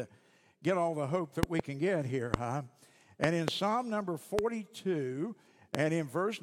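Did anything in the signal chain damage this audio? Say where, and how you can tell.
Yes. Loud pops at 1.43–1.62 s (a double), 2.34–2.36 s, 3.24–3.50 s (a double), 4.39–4.41 s and 5.75–5.77 s jump roughly 20 dB or more above the speech, which continues underneath. These are likely voltage spikes in the analogue wiring, such as a plug, switch or static discharge.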